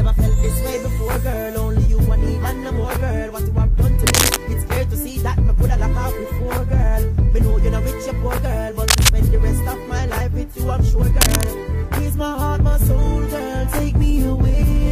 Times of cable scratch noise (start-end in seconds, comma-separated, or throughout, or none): 4.06-4.37, 8.88-9.09, 11.21-11.47